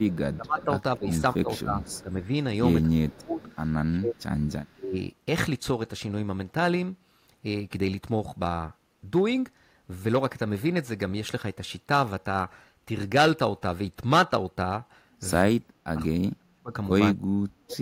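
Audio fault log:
0.0–1.91 s, 3.08–3.51 s and 4.65–4.7 s: echo leak. A faint delayed copy of the speech trails it by 214 ms, roughly 25 dB down in the first two stretches and about 35 dB down in the brief last one, likely residual loudspeaker pickup that the far end's echo canceller failed to remove.
0.35–4.95 s and 15.44–17.79 s: speech suppressed in double talk. The talker's level dips in pieces, about 20 dB at worst in the first span and about 40 dB in the second, around two seconds affected in each, likely an echo canceller attenuating its own talker along with the loudspeaker echo during overlapping talk.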